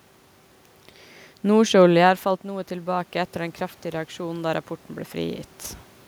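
A speech recording in which the automatic gain rises between 2.46 and 5.52 s. Around 2 s the talker moves away and the level at the microphone drops by about 13 dB; the automatic gain control responds by slowly raising its gain, by about 4 dB over roughly three seconds. The voice and the room noise swell together during that stretch, and the talker shifts position again near 5.5 s.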